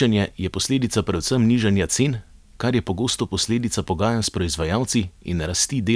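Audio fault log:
No technical fault can be heard anywhere in this speech recording.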